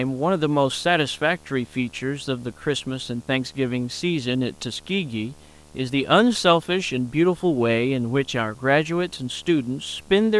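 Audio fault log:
throughout, video or display buzz: a steady buzz at 75 Hz, the field rate of the picture signal, sits about 30 dB below the speech with a harsh hash of harmonics above it, as a screen or video cable couples its refresh energy into the audio path.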